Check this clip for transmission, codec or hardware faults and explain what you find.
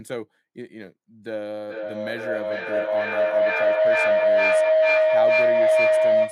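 A feedback howl runs from 1.65 s to the end. Two devices share a room on one call, so sound circulates through microphone and loudspeaker, gaining level each pass. It narrows to a tone around 700 Hz, with the loop repeating roughly every 0.4 s, peaking about 13 dB above the speech.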